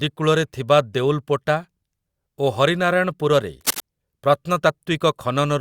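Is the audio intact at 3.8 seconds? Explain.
No. At 3.8 seconds the speech is still under a burst of cable scratch noise. The burst runs from about 3.61 to 3.81 s. It sounds like rough scratching or rustling laid over the speech, dense and uneven, close to the speech in level. The likely cause is a worn cable or connector being moved. Its contact resistance then changes rapidly, and those fluctuations become crackling noise in the signal.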